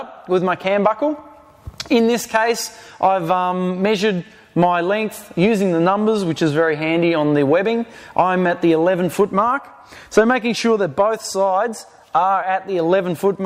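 Nothing in the signal points to a technical fault at any point in the recording.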